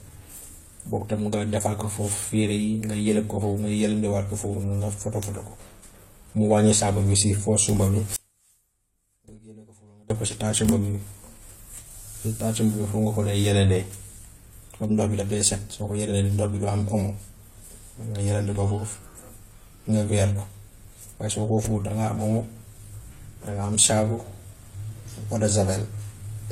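Audio dropout to a faint residue at 8.16 to 10.10 s interrupts this speech clip. Just after "sumba bi" the speech cuts off abruptly, and for about 1.94 s only a faint sound remains, roughly 25 dB below its normal level. Then it snaps back at "def ko si". The break is sharp rather than a pause or fade, so the wanted signal was likely lost upstream while the path after the break stayed live and carried only that weak remnant. Transcoding between lossy codecs colours the whole recording. Nothing is heard above 16.2 kHz, and two sets of coding artefacts sit on top of each other, the second encoder spending its bits on the first one's damage and adding its own. The sound points to an AAC-LC encode at around 48 kbit/s that was likely re-encoded as HE-AAC at 32 kbit/s, with the lower band limit from that chain carried through.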